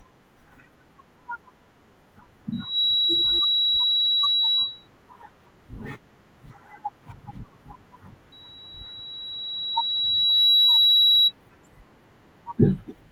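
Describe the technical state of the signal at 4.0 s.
At 4.0 s the signal is in the middle of a loudspeaker feedback squeal that runs from 2.52 to 4.88 s. A microphone is picking up the loudspeaker it feeds, and around 3.9 kHz the loop gain exceeds one, so that tone keeps reinforcing itself. It swells within about a third of a second into a piercing whistle that sits well above the speech and persists until 4.88 s.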